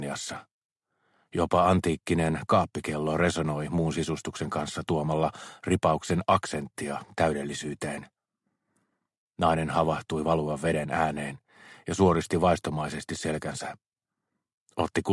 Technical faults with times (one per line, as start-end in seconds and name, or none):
none